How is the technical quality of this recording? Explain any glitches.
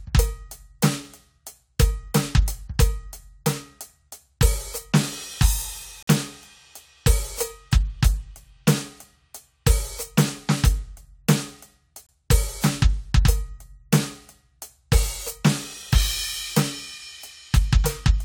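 The music is broken twice by gaps between stream segments. Timestamps on consecutive 6-second segments fail to meet, so the player inserts silence: hard-edged holes at 6.03 s (48 ms) and 12.07 s (23 ms) at the segment joins, with nothing missing from the music itself.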